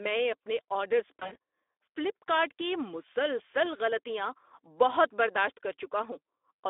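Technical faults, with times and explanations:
Throughout: Speex codec at a rate that fits about 11 kbps, carried over a telephone-style line band of 300 Hz to 3.6 kHz. With so few bits left for the excitation, the speech comes out noisy and hoarse, and the codec damage is plainly audible everywhere.
1.19 to 1.36 s: VoIP packet loss concealed by the speech codec, between "اپنے آرڈرز" and "فلپ کارٹ کی مسلسل". The missing audio fits about 100 ms of lost frames spread over 160 ms, with the longest gap 40 ms. The decoder filled each gap from its last pitch and filter, so the speech smears into a buzzy tone or coloured noise that fades.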